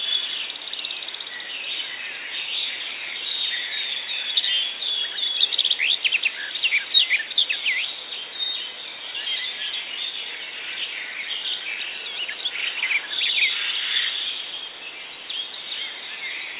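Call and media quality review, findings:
No audible faults found.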